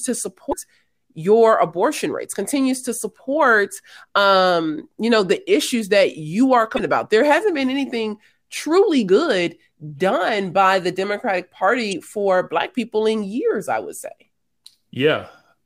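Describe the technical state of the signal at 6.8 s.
At 6.8 s the speech carries a burst of damaged data in the compressed stream, spanning 6.76 to 6.80 s. The decoder cannot read the corrupted frames, loses sync and hunts for the next valid frame header, producing a brief glitch.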